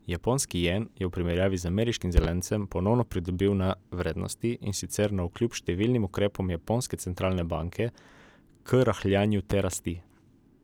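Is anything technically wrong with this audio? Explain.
Yes. Loud pops at 2.17–2.27 s, just after "v primerjavi z ameriškim", and 9.51–9.76 s. A voltage pulse, likely from a switch or static, adds a double pop, about 15 dB and 10 dB above the speech, which continues beneath.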